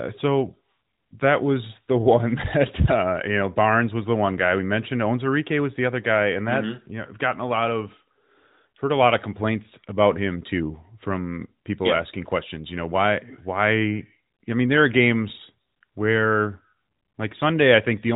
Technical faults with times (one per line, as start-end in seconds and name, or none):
none